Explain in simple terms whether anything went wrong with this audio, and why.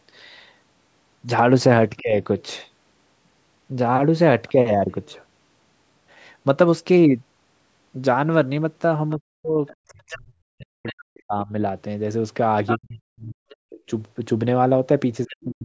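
Speech suppressed in double talk, at 2.0 to 2.16 s, 9.16 to 11.52 s, 12.78 to 13.8 s and from 15.25 s to the end: the talker's speech dips sharply or drops out in pieces. This is likely because both sides spoke at once, and the call's echo canceller turned everything down.

Other side's voice leaking through, at 9.67 to 11.04 s, 12.66 to 12.78 s, 13.49 to 13.56 s and 15.29 to 15.37 s: a quieter second voice slips in behind the talker. Its likely source is the far-end voice playing from the talker's loudspeaker and being picked up again by the microphone.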